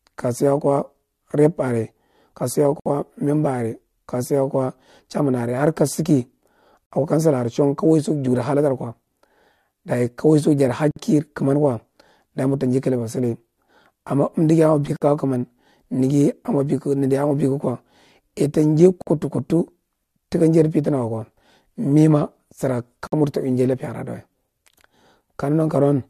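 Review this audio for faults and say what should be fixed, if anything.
The speech drops into a gap at a join of encoded pieces at 2.80, 6.86, 10.91, 14.96, 19.02 and 23.07 s, about 61 ms for the first, 53 ms after, every 4 s or so. Untrimmed encoder delay and last-frame padding leave silence, then it resumes. Trim those at each join, or encode once.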